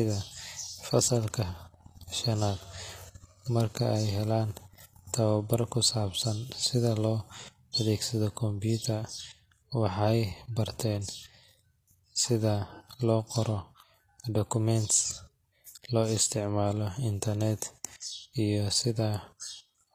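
Throughout the speech, the treble sounds bright but synthetic. The s sounds turn gritty and lispy. This is likely HE-AAC compression, rebuilding the highs from copied lower bands at roughly 24 kbps.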